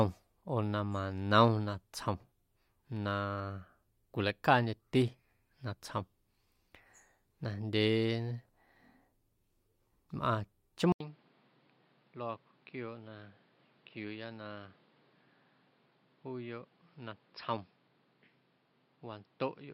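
At 10.92 s the speech cuts out for 80 ms and returns duller and boxier, with nothing above 5.4 kHz, a drop in level of roughly 10 dB, and a new background noise sitting roughly 30 dB below the voice. This continues to the end of the recording. The abrupt change in bandwidth, tone and noise floor is most likely an input switched to a poorer device partway through, with the brief gap marking the handover.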